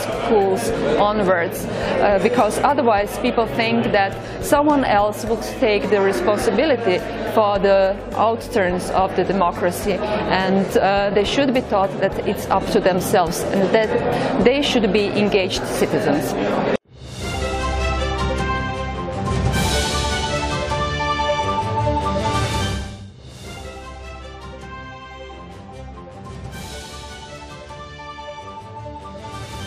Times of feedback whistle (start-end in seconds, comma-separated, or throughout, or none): none